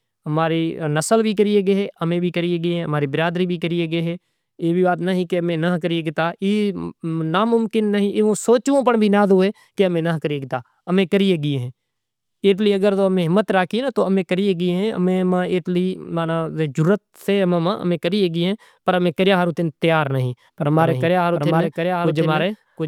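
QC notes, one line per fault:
20.79–22.87 s, doubled audio track: a second full-band copy of the speech cuts in abruptly about 0.7 s behind and roughly 5 dB quieter, running to the end, likely from a slower second capture path. Unlike echo or reverb, it neither decays nor carries room colour.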